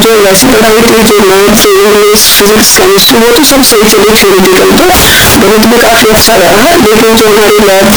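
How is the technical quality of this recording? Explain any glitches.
Poor: one fault runs through the whole speech recording. Float read as integer, throughout: the 32-bit float samples were likely read as 32-bit integers, so sign and exponent bits set each value. The waveform becomes nearly square at a high, almost constant level, very loud and harsh, with background noise as loud as the speech, though pitch can still be followed.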